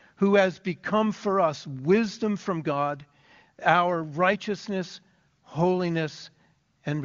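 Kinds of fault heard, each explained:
No kinds of fault are heard in this speech.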